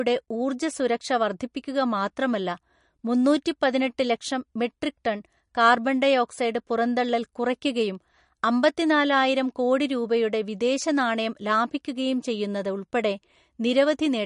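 From start to finish the speech has a watery, swirling quality, and nothing is present above 10.5 kHz, so the top end sounds cut off. This is likely MP3 compression at a bitrate starved for bits, which fits something around 42 kbps. To save data, the encoder has removed all treble above a fixed point. Quiet frequency components drop in and out between frames, which makes the flickering, swirly texture.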